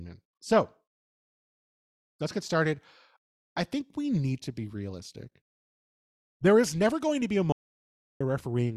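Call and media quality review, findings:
Audio dropout to silence, 7.52–8.21 s, about 0.68 s of speech lost. Hard cut to silence, no room tone, abrupt resume. Flat line on waveform, black gap on spectrogram. Likely input or link loss while the encoder kept writing zeros.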